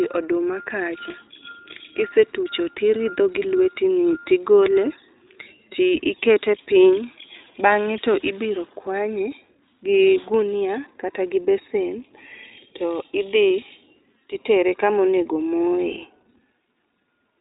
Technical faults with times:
0.00-17.40 iLBC codec

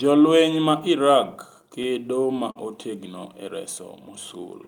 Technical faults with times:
1.61-2.57 repeated stalls (stutter)

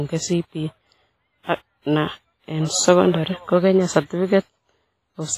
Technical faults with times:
0.00-5.37 WMA compression

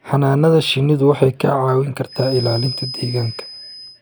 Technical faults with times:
2.02-4.01 feedback whistle

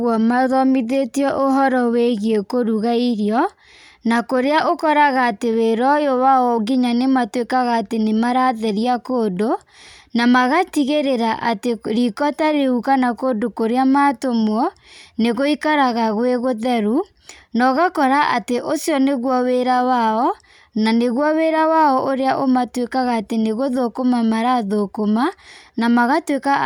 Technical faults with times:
none

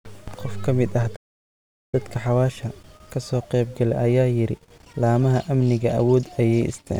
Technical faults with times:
1.15-1.94 playback stall

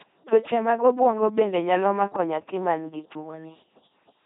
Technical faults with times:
0.00-4.26 LPC-10 vocoder

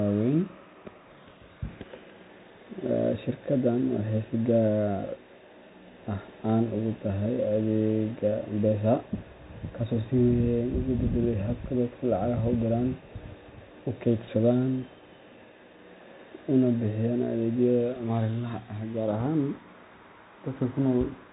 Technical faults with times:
0.00-21.32 Bluetooth CVSD headset codec

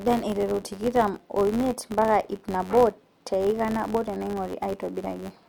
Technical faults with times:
0.00-5.49 filter restarted on every block

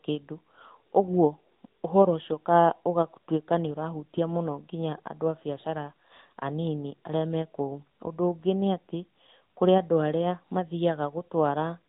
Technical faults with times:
0.00-11.88 AMR narrowband mobile codec

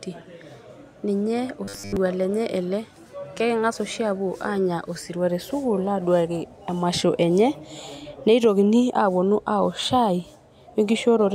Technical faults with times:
1.65-1.97 robotic sound from repeated short buffers

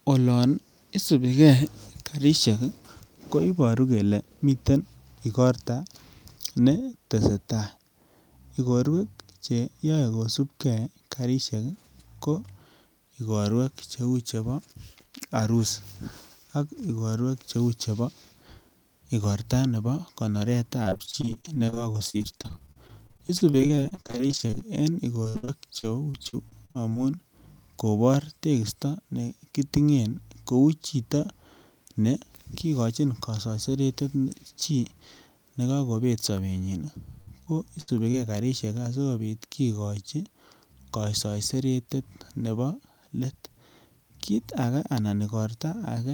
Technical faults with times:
20.83-24.63 repeated packet loss (robotic sound)
25.23-26.97 repeated packet loss (robotic sound)
37.21-38.15 repeated packet loss (robotic sound)

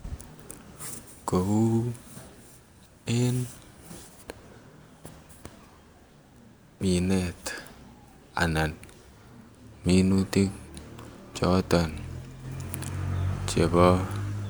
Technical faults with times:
none

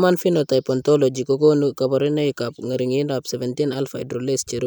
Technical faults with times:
none

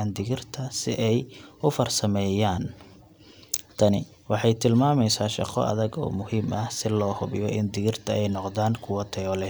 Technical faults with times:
0.00-9.50 sample clock jitter

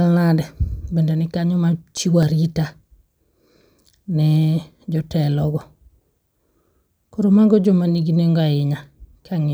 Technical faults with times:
1.46-3.50 CD scratch ticks

